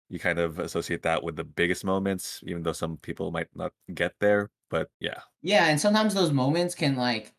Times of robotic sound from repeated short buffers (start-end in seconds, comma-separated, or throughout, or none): none